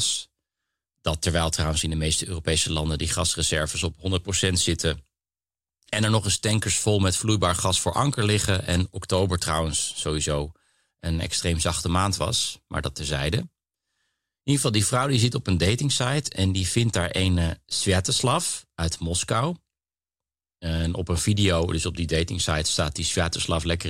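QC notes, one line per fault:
15.25–23.89 s: channel delay (comb filtering). From this point to the end, one channel arrives a tiny fraction of a millisecond behind the other, which fits an offset of about one sample, and the two are summed to mono. Shared content cancels where the offset becomes half a cycle, so the first notch sits near the top of the audible range, around 20 kHz. The speech loses air and sounds slightly dull and closed-in at the very top.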